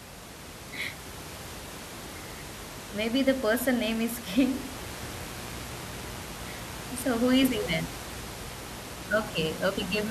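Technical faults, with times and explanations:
4.71 s to the end, mains buzz: sharp switching spikes leak into the signal path twice per 60 Hz cycle, so a steady, raspy buzz with harmonics into the kilohertz range sits roughly 20 dB under the speech, quieter than the room noise yet distinct in tone.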